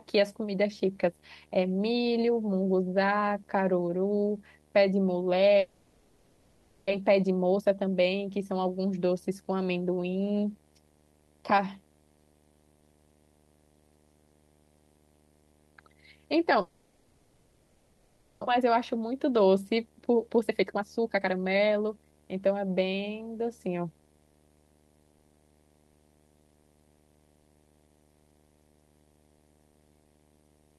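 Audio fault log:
throughout: video or display buzz, a steady 75 Hz buzz with a fizzy hash above it, sitting about 35 dB below the speech. A screen or video cable near the audio path is leaking its picture refresh into the signal at that field rate.
5.59–6.93 s and 16.61–18.49 s: long network dropout. Each time the speech gives way to a smeared, fading continuation of the last sound rather than silence, and resumes with about a second of speech missing. This is likely a network stall, bridged by the receiver's concealment for 1.3 s and 1.9 s.
7.01–8.66 s and 18.60–22.21 s: jitter buffer speed-up. Right after each gap the speech runs hurried at an unchanged pitch, at 117% and then 122% speed. The receiver trims tiny pitch-period slices to shed the built-up delay, about 0.3 s and then 0.7 s.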